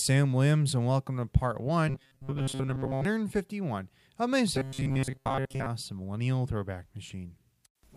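After "and welcome to part" (1.88 to 3.05 s) and "of my" (4.55 to 5.66 s), robotic sound from repeated short buffers: a metallic 134 Hz buzz, likely from a looped 7.5 ms slice replacing most of the audio. It shows as rigid harmonic stripes on a spectrogram and an identical repeating cycle in the waveform.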